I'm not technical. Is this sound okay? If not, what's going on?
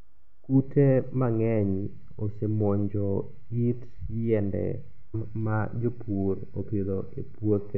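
No. At 5.13 s the speech jumps ahead with a tiny blip, dropping a bit of what was being said. This is likely a stream segment skipped during playback.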